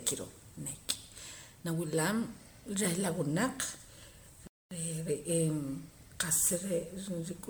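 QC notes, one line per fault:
throughout: generation loss, swirly, hollow, smeared sound with blurred attacks, likely from about ten MP3 passes at 128 kbit/s; the spectrogram shows spectral holes and nothing above 19.9 kHz.
4.47–4.71 s: playback stall, sound stops mid-flow for 240 ms, likely the player starving for data; the waveform shows a flat silent gap before the sound resumes.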